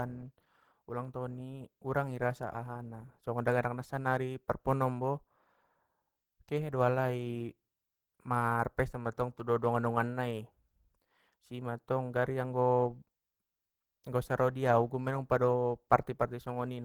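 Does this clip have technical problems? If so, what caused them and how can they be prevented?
Yes. The speech was likely squeezed through Opus compression at a very low rate, with the hoarse, muffled character pointing to about 16 kbps in the codec's hybrid speech mode. The encoder keeps content up to about 20.2 kHz but, starved of bits, rebuilds much of the upper spectrum coarsely, so the sound is plainly rough and grainy throughout the clip. Encoding at a higher bitrate, or keeping the original uncompressed, would prevent it.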